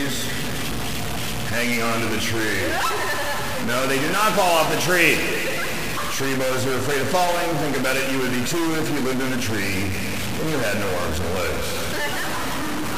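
A stuck bit runs throughout the sound, adding harsh, buzzy distortion and noisy pauses, likely from one fixed data bit producing errors of about -20 dBFS.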